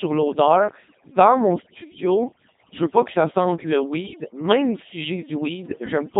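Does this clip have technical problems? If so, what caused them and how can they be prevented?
Yes, two problems run through the whole clip. The first is overdone noise removal. The noise reduction was set so aggressively that it clamps individual frequency bands whenever they sit near its noise estimate, and the quieter parts of the speech get pulled down along with the noise. The background drops and breaks up into little twinkling specks. To prevent it, back the reduction amount off and let a bit of natural room noise stay.

The second is the Codec 2 vocoder, and the damage is heavy. There's no energy above 3.8 kHz, and the buzzy, robotic quality fits a very low bitrate around 2.4 kbit/s. Codec 2 doesn't carry the waveform. It sends pitch, voicing, energy and a rough spectral shape, and the decoder rebuilds the voice from sine waves, so the natural texture is gone. To prevent it, record or send through a proper waveform codec at a decent bitrate, and save vocoders like this for narrow radio links.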